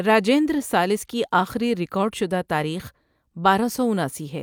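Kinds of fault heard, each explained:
No faults detected.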